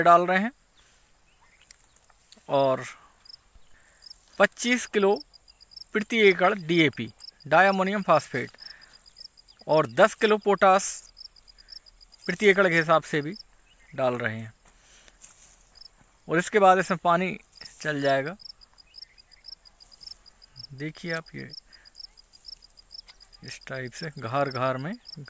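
Nothing stood out as a technical problem on listening to this recording.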